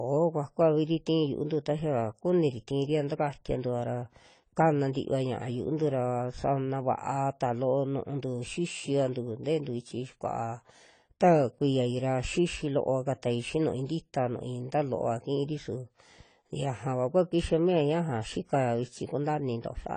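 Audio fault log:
Throughout: AAC compression, likely at a low bitrate near 24 kbps, leaves the speech dull with a fizzy, warbling edge on sibilants. A spectrogram shows nothing above 10 kHz, a flat ceiling, with holes or noise-filled patches and smeared energy across the remaining bands.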